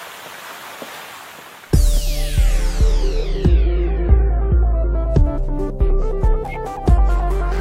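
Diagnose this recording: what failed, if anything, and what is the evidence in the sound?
The failure is at the codec stage: damaged compressed frames were decoded and played rather than concealed. Three short bursts of misplaced energy mark them, from 1.06 to 1.19 s, 3.20 to 3.24 s and 6.49 to 6.57 s, heard as chirpy blips that peak around -20 dBFS, with the loudest one, the brief middle burst, nearer -15 dBFS. Each length fits a corrupt frame decoded, roughly a few frames, then one, then two. Flipped bits made the decoder misread gains and spectral codes.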